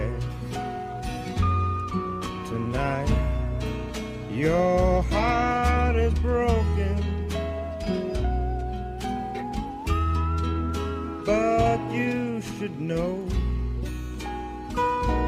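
No dropouts, clicks, distortion or timing glitches turn up anywhere in the recording.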